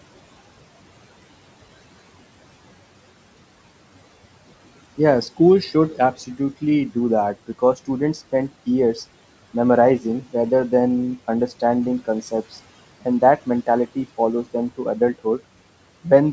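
Speech cut by the noise suppressor shows up five times: 5.95–6.63 s after "school should", 7.48–7.89 s before "spend years", 10.0–10.34 s before "rather than", 13.02–14.46 s, and 14.77–15.41 s. Short bits of quiet speech are pulled down by about 12 to 17 dB together with the room noise, leaving them faint and swallowed. Unlike a packet-loss dropout, the sound dips softly rather than cutting to silence.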